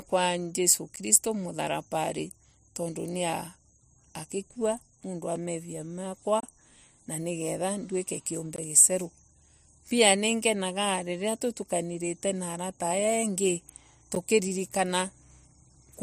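Blocks of digital silence, from output buffers left unfilled or invalid calculated values, cut this speech abruptly at 0.96, 5.36, 6.40–6.43, 8.56–8.58 and 14.15 s, ticking briefly or leaving 20–30 ms holes.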